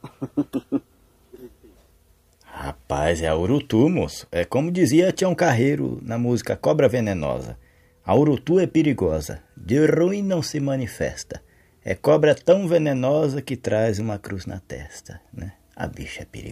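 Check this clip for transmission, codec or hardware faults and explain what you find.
Nothing in the signal path points to a transmission, codec or hardware fault.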